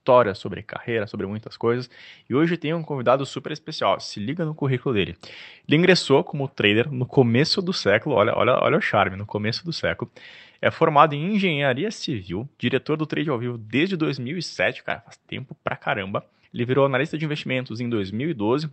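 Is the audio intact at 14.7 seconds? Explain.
Yes, the speech at 14.7 seconds is intact, with no dropout, glitch or other fault at that moment.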